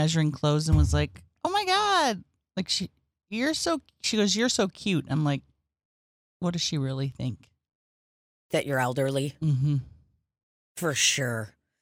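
No technical faults can be heard anywhere in this recording.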